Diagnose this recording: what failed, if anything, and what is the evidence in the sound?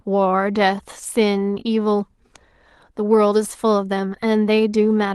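Network stage: from 1.55 to 1.61 s a short stretch sounds rougher and noisier with no dropout, a lost packet rebuilt from error correction. The next Opus packets carried low-bitrate copies, consistent with two lost 20 ms frames. The waveform stays continuous; the spectrogram shows a smeared, grainier patch.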